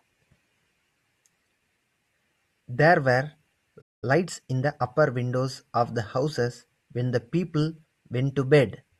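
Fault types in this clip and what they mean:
playback stall: At 3.81 s the speech stops mid-flow and stays silent for 208 ms, until 4.04 s, likely because the player ran short of data or its thread was blocked. A waveform shows a flat gap, and a spectrogram shows an empty vertical band.
time-compressed catch-up: From 4.04 to 4.86 s the player trims its backlog by cutting and cross-fading short slices, so speech runs 1.25 times fast at unchanged pitch. On a spectrogram, harmonic spacing holds while syllables crowd together, and the waveform looks horizontally squeezed.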